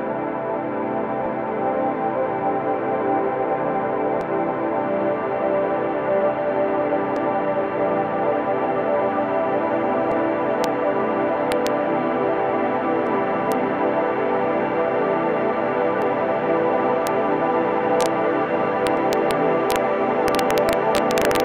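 Skips at 1.26, 4.21, 7.16, 10.12, 13.07, 16.02 and 18.97 s, each removing roughly 50 ms and splicing the edges together without silence, are likely audio missing between chunks. The regular spacing suggests a 3-second chunk, with the gap lost as each chunk closes and the next opens.

From 10.64 s, integer overflow produces harsh cracks at 10.64, 11.52–11.67, 13.52, 17.07, 18.01–18.06, 18.87–19.31, 19.71–19.76 and 20.28–21.40 s. Peaks driven up to about 2 dB past full scale wrap to the opposite sign instead of limiting, so the sound flips across the whole range and cracks far more sharply than clipping.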